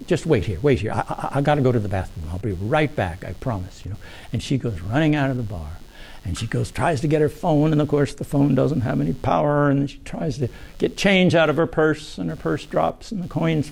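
A buzzy, pulsing computer activity noise runs under the sound the whole way through, ticking along at roughly a hundred pulses a second and sitting about 30 dB down. That's the machine's processing load dragging the shared audio ground around, so it follows the computer, not the material.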